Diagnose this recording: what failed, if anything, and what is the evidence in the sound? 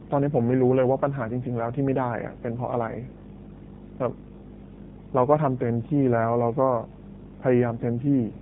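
Mains hum is present in the analogue wiring stage. A steady 50 Hz tone with low harmonics runs through the whole recording, nearly as loud as the speech itself. That points to a ground loop or a nearby transformer coupling the power line into the signal path.

AMR narrowband mobile codec damage comes from the codec stage. Nothing above 3.8 kHz survives, and the speech sounds buzzy and synthetic throughout, which fits a low AMR-NB mode around 7.4 kbps. The pulse-driven vocal-tract model reconstructs the speech coarsely.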